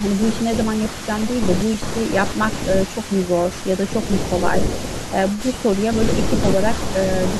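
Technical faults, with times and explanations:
0.00–0.21 s, 1.64–1.81 s, 2.84–4.09 s and 4.50–5.42 s, echo leak: a faint copy of the speech returns 316 ms late, heard as a distinct repeat rather than the smeared tail of room reverb, likely from a loudspeaker echo the canceller failed to remove.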